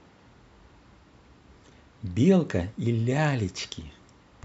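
A speech recording with no audible technical fault anywhere in the signal.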